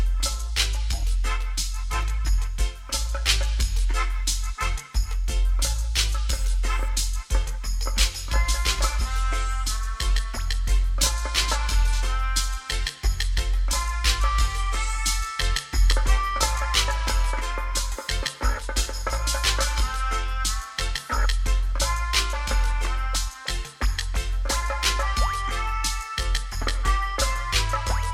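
No technical fault can be heard anywhere in the audio, which has no interruptions or level disturbances.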